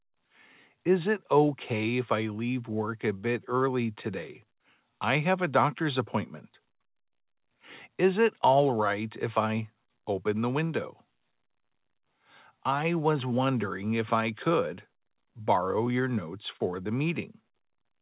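Nothing goes wrong anywhere in the clip, and the only thing to hear is the call path itself: it sounds like narrowband telephone audio with nothing above 4 kHz, which fits a G.711 A-law link at 64 kbps.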